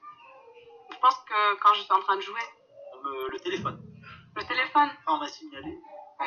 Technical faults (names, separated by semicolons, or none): DAB burbling